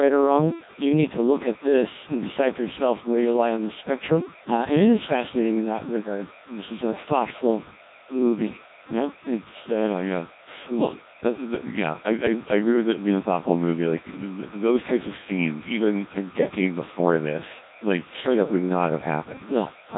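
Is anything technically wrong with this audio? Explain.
Yes, two faults run through the whole speech clip.

Timecode bleed is audible from start to finish as a steady chirping warble behind the speech, about 25 dB down. Linear timecode from a neighbouring track or cable is leaking in. Its square wave flips between tones near 1 and 2 kHz, and the pattern fits 30 frames per second.

Codec 2 vocoder damage is also present throughout, and it is heavy. The decoder rebuilds the voice from sine waves using only pitch, voicing, energy and envelope data, so the original waveform is gone. The result is robotic and buzzy, nothing remains above 3.8 kHz, and the coarseness points to a very low rate such as 1.6 kbit/s.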